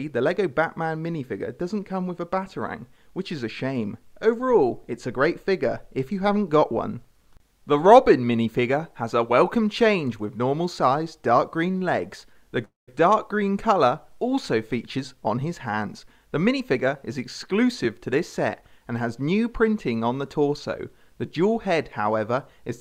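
Just before 11.8 seconds the audio catches twice in quick succession: at 11.71 to 11.75 s and again at 11.78 to 11.82 s, the sound hangs for a moment, each time held about 27 ms too long with a faint buzz or dip, then picks up exactly where it left off. These are short stalls from a late packet. The jitter buffer emptied because the next packet was not there when it was due, so the receiver stretched the last bit of sound to fill the wait and resumed once the packet turned up, losing nothing. A longer interruption follows from 12.65 to 12.89 s, a call audio freeze lasting roughly 230 ms. It opens with a brief fading buzz or hiss and then drops into about 160 ms of silence before the sound carries on from the same point, so a gap has been inserted rather than anything cut out. The likely cause is packets held up in transit long enough that the buffer ran dry and the receiver's fill-in decayed to nothing. 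From 14.97 to 18.72 s the audio then runs slightly hurried, about 6 percent fast, with no change in pitch. This is a jitter buffer speed-up. Having built up more audio than it wants, the receiver trimmed many tiny pitch-period-sized slices in a row, around a fifth of a second in total, to bring the delay back down.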